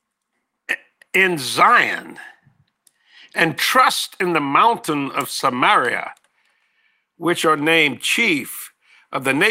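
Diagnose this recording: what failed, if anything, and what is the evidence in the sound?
Nothing failed here: there's no dropout, click, distortion or glitch anywhere in the recording, so no stage of the chain needs blaming.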